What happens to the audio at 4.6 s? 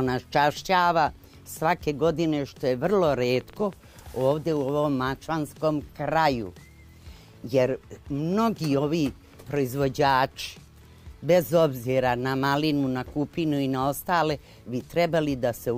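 At 4.6 s, irregularly spaced popping, about 7.6 per second and as loud as the sound, ends a train of clicks from 3.24 to 4.70 s, likely interference or a faulty connection.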